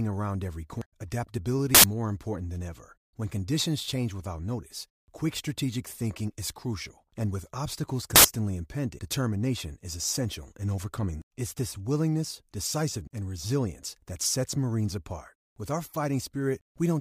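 At 0.72 s, just after "around every", the speech lurches forward. The same jump recurs at 1.56 s. These are compressed frames skipped: whole frames never reach playback, so roughly a third and a fifth of a second of audio vanish.

At 4.81 s a short crackle appears, peaking at about -32 dBFS. A fainter one follows at 6.39 s, at about -36 dBFS, between "quick strategic thinking" and "is crucial and with". Each is a corrupt FLAC frame. Flipped bits derail the decoder's prediction until the next clean frame. The first burst suggests more than one frame was affected.

The skips return at 8.06 s, 8.99 s, 11.22 s (after "is essential in overcoming") and 13.08 s, each dropping a fifth to a third of a second.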